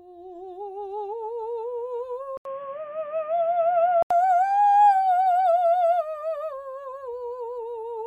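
At 2.37 s an 80 ms gap precedes boxy music, cut above 3.4 kHz, with faint background noise. The input likely switched to a poorer device until 4.11 s.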